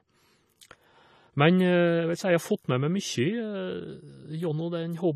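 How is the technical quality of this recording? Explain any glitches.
Quality is limited by one fault present for the whole clip. AAC compression runs throughout: the speech stops at 14.1 kHz and sounds dull, with fizzy sibilants, likely from a low-bitrate AAC-LC encode.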